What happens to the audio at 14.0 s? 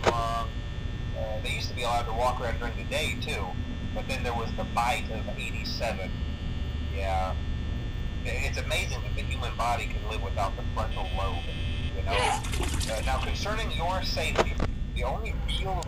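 Nothing goes wrong at 14.0 s; the audio runs through that moment intact, with no dropout, click or other fault.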